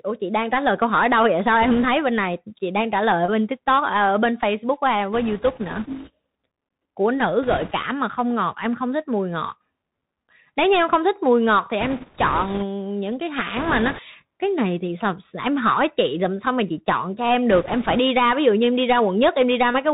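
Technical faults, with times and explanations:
Throughout: Bluetooth CVSD headset codec. Nothing above 4 kHz, so the speech is narrow and boxy. The one-bit delta coding's step size lags loud high sounds, making s sounds scratchy under a granular hiss. This fits a 64 kbps headset link.
1.62–1.85 s, 5.13–6.10 s, 7.43–7.72 s, 11.81–12.64 s, 13.57–14.00 s, 17.51–17.98 s: bit errors on a Bluetooth voice link. Flipped bits add a rushing, crackly noise over the speech, heaviest around 13.6 s. There are no sharp clicks, because each bit carries little weight and the error decays away.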